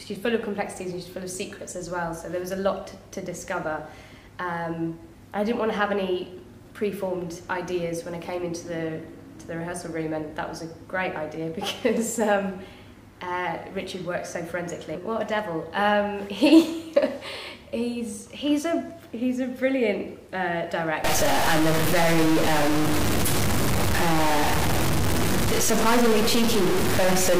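From 21.04 s to the end at 27.40 s, the sound takes on added distortion consistent with a stuck bit, likely one data bit held at a fixed 0 or 1 by a failed line or converter. Roughly half of all sample values then land off by that bit's weight, following the shape of the waveform, and because the error also flips with the sign of small values, quiet stretches in this section fill with noise as well.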